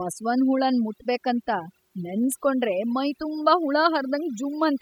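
A speech recording with overdone noise removal across the whole clip: the background drops and breaks up into twinkling specks. A noise reducer set too aggressively is cutting individual frequency bands near its noise estimate, taking quiet speech detail with them.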